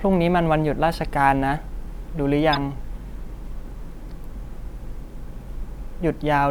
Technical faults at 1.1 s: none

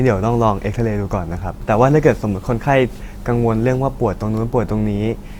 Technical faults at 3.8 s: adaptive stream at a lower bitrate

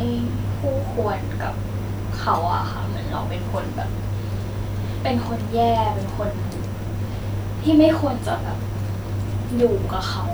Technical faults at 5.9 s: none

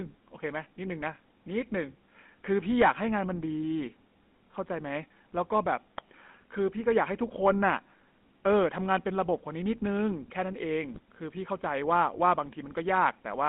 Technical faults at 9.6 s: GSM full-rate codec

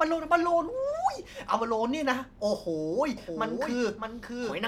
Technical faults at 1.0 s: none

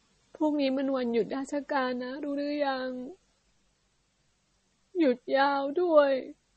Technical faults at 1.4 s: MP3 compression

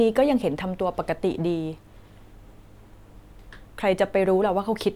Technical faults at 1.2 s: none

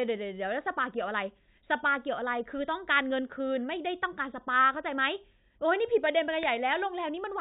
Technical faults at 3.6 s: none

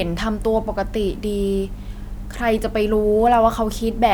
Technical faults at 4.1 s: none

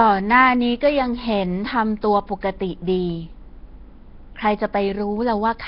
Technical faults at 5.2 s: Nellymoser compression

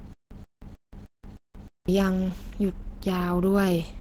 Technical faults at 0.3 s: Opus compression; stutter with silent gaps

